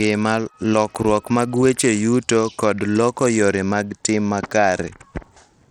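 A speech recording with Bluetooth SBC compression damage running its whole length: the treble thins and flickers while a gritty, aliased haze sits on the sound. The cause is likely a starved SBC bit pool, consistent with roughly 80 kbps, leaving upper sub-bands with too few bits.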